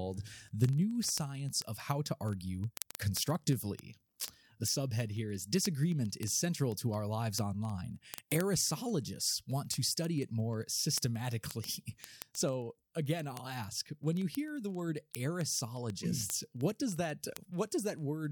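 From 0.11 to 18.30 s, word clock ticks repeat roughly every 40 ms as two unlocked clocks slip single samples. A spectrogram shows thin vertical lines, and the waveform shows spikes.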